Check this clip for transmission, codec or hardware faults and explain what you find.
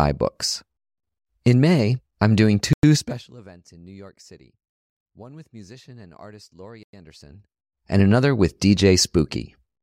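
Two faults show up, and both look like delivery and processing problems rather than anything in the source.

Gap between chunks: 100 ms hard-edged holes at 2.73–2.83 s (right after "I'm doing") and 6.83–6.93 s, spaced to fit 4-second chunks.

Zipper noise: ticking while the level moves in 3 dB steps, down about 25 dB from 2.94–3.3 s before "events in", and back up 7.16–7.96 s before "another with".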